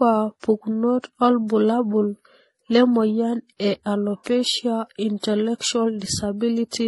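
From start to finish, the speech carries the layered damage of transcoding between lossy codecs, likely a low-rate HE-AAC encode, around 20 kbit/s, passed through an MP3 encode around 48 kbit/s. The second encoder spends its bits reproducing the first one's artefacts and adds its own, so both sets are heard stacked together. Nothing survives above 11.5 kHz, leaving a dull top end.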